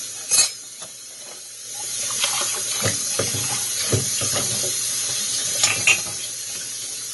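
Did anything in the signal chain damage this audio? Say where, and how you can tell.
Yes, at the codec stage, throughout: nothing above 11.5 kHz, with two different kinds of artefacts heard together. This is likely transcoding between lossy codecs, a low-rate AAC pass re-encoded to MP3, which spends bits on inherited artefacts. A single encode would show one artefact type.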